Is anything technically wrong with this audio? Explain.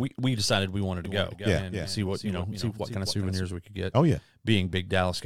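Yes. From 1.05 s to 3.43 s the speech carries a doubled audio track: a second full-band copy trails roughly 300 ms behind, around 10 dB quieter, with no room decay. It starts and stops abruptly, likely from a slower second capture path.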